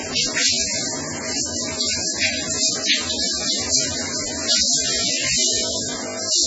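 Throughout, the sound is watery and swirly, with smeared attacks. Nothing is heard above 7.6 kHz. This is likely MP3 compression, with heavy codec damage that fits a very low bitrate, around 16 kbps. Weak frequency lines flicker between frames.

From 4.92 to 6.46 s, the audio becomes a rigid, metallic 50 Hz buzz. This is robotic sound from repeated short buffers. The likely cause is a 20 ms stretch being replayed while most of the real audio is skipped.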